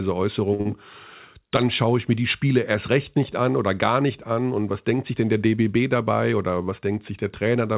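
At 0.54 s the speech hangs for about 49 ms, until 0.61 s: a short stall from a late packet. The jitter buffer ran dry while a packet was still in transit, so the receiver stretched the last sound and then resumed from the same point once the packet landed. What sets it apart from a loss is that nothing is skipped. The sound is only held too long, with a faint buzz or dip, and everything after it arrives about 49 ms later.

Directly after, from 0.61 to 0.67 s, comes short concealed packet loss. Here about 40 ms of audio never reached the decoder, and the receiver papered over the gap by extending the preceding sound before blending back into real audio. Unlike the stall just before it, this one does drop content. It is heard as a brief smear or wobble, and a short consonant can go missing. The two sit back to back near 0.6 s.

From 5.95 to 6.32 s the jitter buffer speed-up shows itself. 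The buffer was holding more audio than it targets, and to trim that delay the receiver cut out short pitch-period slices again and again, about 40 ms in all. The speech runs about 10% fast with its pitch unchanged, which is what separates it from a sample-rate error that would raise the pitch too. It sounds hurried.

Throughout, the band stops at 4 kHz, which fits a G.711 mu-law call path at 64 kbps.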